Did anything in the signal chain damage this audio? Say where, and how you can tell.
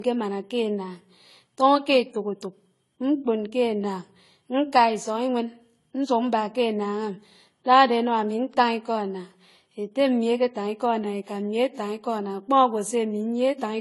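Yes: transcoding between lossy codecs, heard throughout the speech at the codec stage. Nothing reaches above 11.5 kHz, and two kinds of artefact sit on top of each other: the first codec's artefacts and the second codec's own, heard together. The likely cause is a low-bitrate AAC pass, around 32 kbit/s, re-encoded as Vorbis at a similar rate. The second encoder wasted bits on the first one's artefacts while adding its own, and the lower cut-off was kept.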